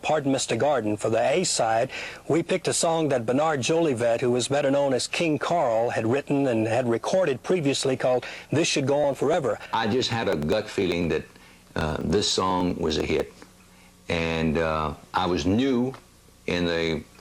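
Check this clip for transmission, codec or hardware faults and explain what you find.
One fault is present. Periodic USB or driver dropouts occur from 9.04 to 13.79 s. A recurring bus or driver stall skips about 1 ms every 0.099 s, producing roughly fifty evenly spaced ticks. Their clockwork regularity distinguishes them from the irregular gaps of network packet loss.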